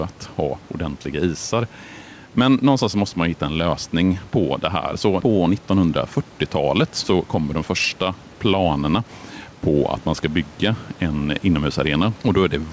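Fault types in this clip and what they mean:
Gain pumping: The level gets pushed down each time the speech gets loud, a swing of roughly 5 dB that runs through the whole clip. That's likely the mic gain set far too high, with a fast limiter or compressor clamping it on every loud bit. You end up with squashed speech, where loud and soft parts sit closer together than they should.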